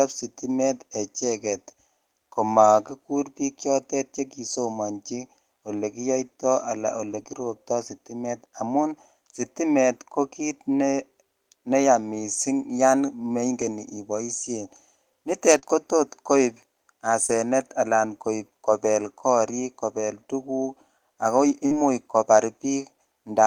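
A speech recording with two kinds of network-loss artefact. Lost packet rebuilt from error correction occurs at 1.49–1.55 s (40 ms), 7.11–7.21 s (60 ms) and 13.61–13.63 s (20 ms), and as the closing 20 ms of the gaps at 15.62 s, 17.28 s and 21.71 s. There is no dropout at these points. The audio turns briefly coarse and grainy because the decoder played the low-bitrate redundant copy carried in the following packet in place of the missing one. The longer stretches fit two and three separate lost packets. Short concealed packet loss appears at 7.23–7.27 s, at 15.59–15.64 s just before "kotot koib", at 17.26–17.30 s and at 21.66–21.73 s just after "ak ko". At each of these, roughly 20–40 ms never arrived in time. The receiver extrapolated the preceding sound for 16 to 44 ms and then crossfaded back, which produces a short smear or wobble where the real signal is missing.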